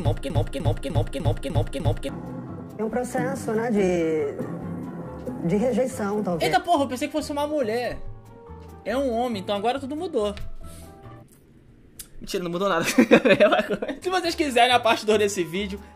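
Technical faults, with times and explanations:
0.0–2.09 s, broken-record loop: a 0.3 s fragment is already repeating at the start, six times back to back, likely a stalled player resending its last buffer.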